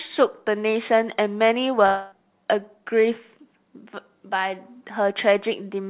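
From 1.86 to 2.14 s, the sound stops and a fading buzz stretches the last moment for about a quarter second, never reaching true silence. Audio resumes with roughly 0.26 s missing, likely a long network dropout rather than a brief packet loss, which would glitch only momentarily.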